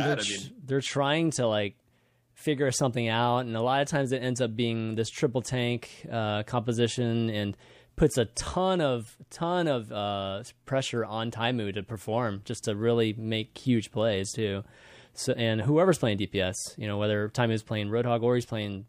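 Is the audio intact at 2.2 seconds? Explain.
Yes, the speech at 2.2 seconds plays through intact, with no dropout, click, distortion or other fault at that moment.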